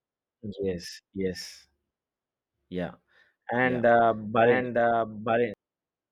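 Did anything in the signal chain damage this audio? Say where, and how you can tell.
Yes. From 3.62 s to 5.54 s the speech has a doubled audio track: a second full-band copy, about 5 dB quieter, runs roughly a second behind the original. It has no reverb tail or room colour, and it switches on and off abruptly at both ends. The likely cause is a second, slower capture or routing path, or an edit that left two copies out of step. On a spectrogram, each speech pattern reappears about a second later, slightly fainter. On the waveform, the envelopes overlap within that window.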